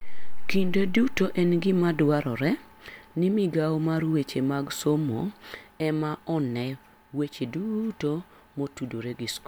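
Nothing in this speech recording stands out as a technical fault, so there's nothing to flag anywhere along the way.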